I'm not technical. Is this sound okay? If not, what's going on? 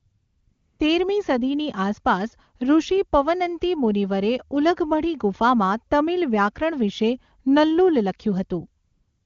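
No. At the start, up to 0.79 s just before "તેરમી સદીની આસપાસ ઋષિ", and again from 8.85 s to the end, you hear AMR comfort noise: the phone stopped sending sound and filled the gap with smooth, fake hiss.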